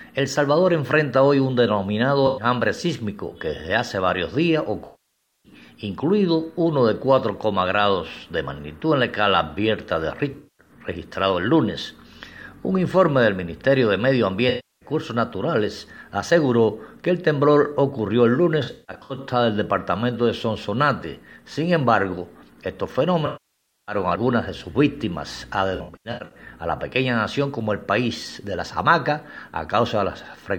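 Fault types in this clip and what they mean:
AAC frame loss with concealment: runs of AAC frames went missing, and the decoder filled each gap from the last good spectrum with scrambled phase. The result is smeared, noisy, phasey patches at 2.27, 4.85, 10.31, 14.49, 18.63, 23.26 and 25.75 s, lasting about 0.1 to 0.6 s. The longest, at 4.85 and 23.26 s, decay toward silence before fading back. On a spectrogram these show as blurred, frozen-looking blocks, and on the waveform as a flattened, noise-like envelope.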